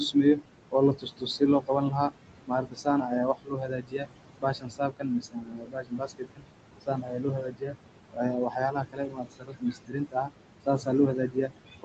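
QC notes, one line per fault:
throughout, noise suppressor artifacts: The suppressor lowers the room noise, which sits only about 9 dB under the speech, by about 21 dB frame by frame. The background sinks in the gaps and swells back beneath the speech.
0.00–2.13 s, 2.46–6.46 s, 6.81–7.78 s, 8.10–11.84 s, speech cut by the noise suppressor: In each stretch the suppressor mistakes parts of the speech for noise and pulls them down with the background, by about 19 to 22 dB at worst. Roughly 0.7 s, 3 s and 0.7 s are hit in the first three spans, so soft consonants and word endings sound swallowed or faint.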